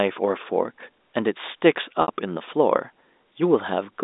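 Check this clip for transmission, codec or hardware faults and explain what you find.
One transmission fault: packet loss with pitch repetition, from 2.02 to 2.08 s, across the G.711 telephone band of roughly 250 Hz to 3.7 kHz. About 60 ms of audio went missing, which fits three 20 ms packets. The receiver filled the gap by looping the last pitch period and fading it over about 50 ms, so the sound briefly holds with a buzzy quality before it resumes. On a spectrogram, the harmonics run flat and unchanging, then dim. In the waveform, identical cycles repeat with shrinking amplitude.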